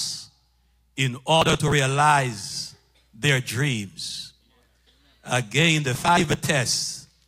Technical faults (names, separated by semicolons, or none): processor overload crackle